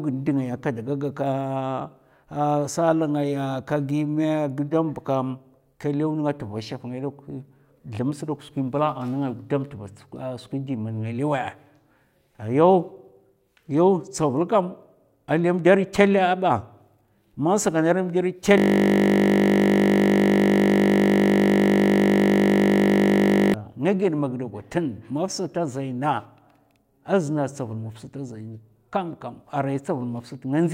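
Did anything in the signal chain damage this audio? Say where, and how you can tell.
Yes. A system hang loop at the driver or buffer stage from 18.58 to 23.54 s repeats one 20 ms slice exactly, giving a steady 50 Hz buzz rather than the irregular gaps of a dropout.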